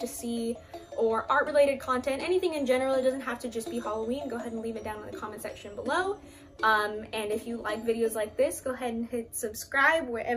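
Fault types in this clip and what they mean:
No faults detected on listening; the signal path shows nothing that needs attention.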